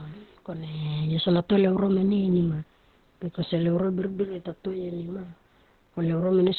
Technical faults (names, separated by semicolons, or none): Opus compression